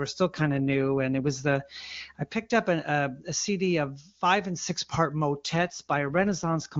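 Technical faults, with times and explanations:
0.33 to 1.55 s and 5.45 to 6.67 s, AMR rate drop: twice the speech turns rough and synthetic, the second time right after "five and six part". The wideband AMR-WB codec, clear outside these spans, has been told to code at a lower rate on a weak link, which fits a step from 23.85 to 8.85 kbit/s. Fewer bits describe the vocal tract and pulses, so the speech turns raspy while the band stays intact and no gap appears.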